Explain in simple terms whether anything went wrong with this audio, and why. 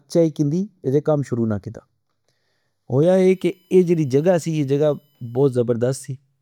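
Two things go wrong in this speech recording, one after the other.

From the start to about 3.03 s there is channel delay (comb filtering). One side of the stereo recording arrives a fraction of a millisecond later than the other. When the two are combined, parts of the sound cancel out at evenly spaced pitches, the first around 3 kHz. The voice sounds hollow and slightly dull, as if heard through a tube. Unlike a bad microphone or muffled room, this colouring is a fixed notch pattern that stays put whatever is said.

From about 3.30 s to 5.54 s a faint USB whine appears. Electrical noise from a USB connection leaks into the audio as a steady, high-pitched tone based on 1 kHz, loudest at its multiple near 3 kHz. It is set apart from ordinary mains hum by its much higher pitch. It also differs from the earlier hollowness because it adds a sound that holds steady instead of removing part of the voice.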